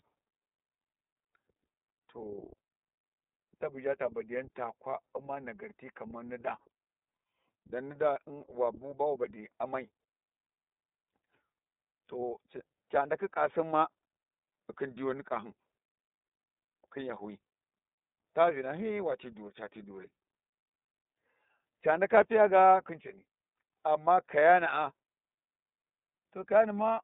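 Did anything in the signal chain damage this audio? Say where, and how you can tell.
Yes, iLBC codec damage throughout the speech. Band stops near 3.7 kHz with a rough, synthetic texture; plain low-pass filtering wouldn't roughen it. The texture suggests 30 ms frames.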